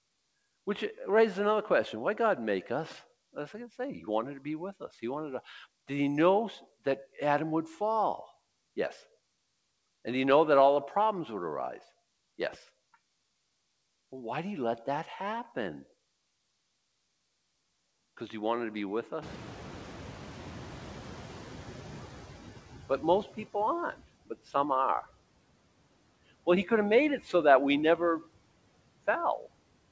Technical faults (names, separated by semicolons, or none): noise suppressor artifacts; noise suppressor catching up; speech cut by the noise suppressor